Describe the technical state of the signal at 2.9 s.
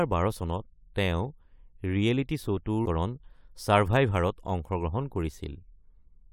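A stream segment skipped at about 2.85 s: one segment of the segmented stream likely failed to load, and the player moved straight on to the next. The speech jumps ahead abruptly at that instant with a brief blip, and the missing stretch is simply gone.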